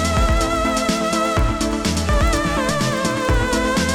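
From start to finish, a filter restarted on every block. It loses its memory at each boundary and begins again from silence. Each restart leaves a small transient. Together they form a steady buzz near 21.5 Hz that tracks the sound's level, which fits a 2048-sample block.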